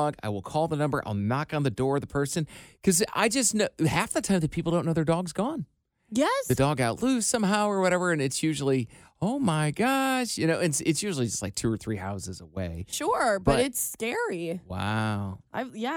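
No technical faults can be heard anywhere in the speech recording: the signal stays continuous and stable throughout.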